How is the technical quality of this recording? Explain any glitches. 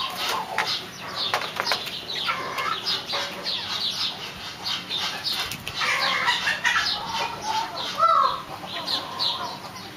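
No glitches or faults are audible.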